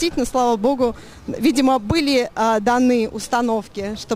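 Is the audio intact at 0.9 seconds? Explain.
No. At 0.9 s, as throughout, crude rate conversion (consistent with 48 kHz to 44.1 kHz by repeating or dropping samples) adds an inharmonic fizz roughly 30 dB down, visible as stray spectrogram lines that don't follow the harmonics.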